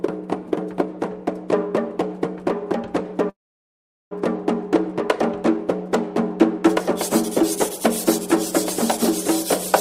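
From the start, the whole thing is a doubled audio track: a full-band second copy trails about a second and a half behind at much the same level, with no room colour. Most likely it was captured twice by a slower path, or an edit left two copies out of step.

At 3.29 s there's a call audio freeze running to 4.13 s. The last sound carries on briefly, then about 770 ms of silence follows. That's likely a jitter buffer running dry while packets were held up. When playback resumes, it continues right where it stopped, so nothing's lost but everything after lands about 0.8 s later.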